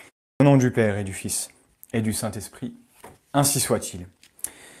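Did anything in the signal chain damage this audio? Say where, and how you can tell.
Yes, at the playback stage: the output device dropped into a low-power idle state during the 0.33 s of silence that opens the clip and was not ready again when the sound resumed. This is a clipped start after a pause. The first 52 ms of speech, from 0.35 to 0.40 s, never reached the output, so the speech begins abruptly out of silence with its opening sounds missing and no natural onset.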